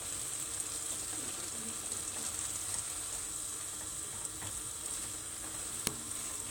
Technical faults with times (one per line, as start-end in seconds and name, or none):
0.91-0.95 damaged data in a compressed stream
3.12 damaged data in a compressed stream
5.87 damaged data in a compressed stream